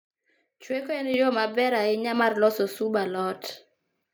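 A speech recording in which the whole signal, voice and background alike, jumps abruptly louder by about 6 dB at 1.14 s and stays there. This is a microphone volume stepped up fault: the call software judged the input too quiet and raised the device's capture gain in a single step.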